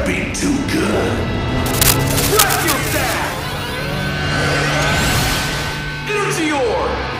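From 1.66 to 3.13 s the audio carries cable scratch noise: dense, irregular crackling and rustling roughly as loud as the sound itself, likely from a worn cable or connector being moved. On a spectrogram it shows as ragged broadband vertical streaks, and the waveform as jagged spiky bursts.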